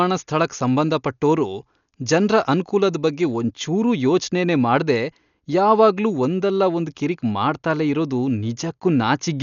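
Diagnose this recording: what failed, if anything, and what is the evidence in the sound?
The failure is at the codec stage, and the likely cause is Dolby Digital compression at a very low rate. Across the whole speech clip the band stops at 7 kHz, so everything sounds dull and closed-in. The damage is heavy, with a rough, fluttering noise riding on the voiced sounds. The encoder ran short of bits, so it narrowed the bandwidth and left many frequency lines empty for the decoder to fill with noise. That fits a bitrate around 48 kbps.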